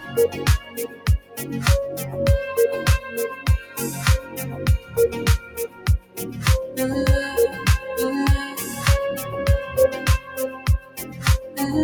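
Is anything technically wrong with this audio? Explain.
Yes. Throughout, the level pumps and breathes, swinging by roughly 10 dB as held and fading parts sink while sudden onsets punch through. That is a noise suppressor, applied to music or sounds it wasn't built for, mistaking steady tone and decay for noise.

Several passages are sound cut by the noise suppressor: 0.6–1.38 s (about 12 dB down), 4.21–4.37 s (about 7 dB), 4.78–4.95 s (about 9 dB), 5.4–6.18 s (about 12 dB), 10.19–11.19 s (about 11 dB) and 11.39–11.58 s (about 8 dB). Each dips and thins, because the suppressor judged that stretch noise-like.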